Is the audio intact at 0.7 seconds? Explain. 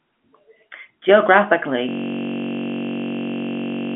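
Yes, at 0.7 seconds the speech is intact, with no dropout, click or distortion, only the narrow telephone band of G.711 coding.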